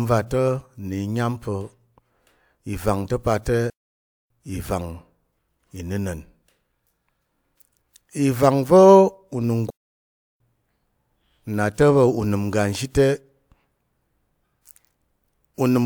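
The player likely ran short of data twice, a playback stall that cuts this speech to silence from 3.70 to 4.30 s and 9.70 to 10.40 s.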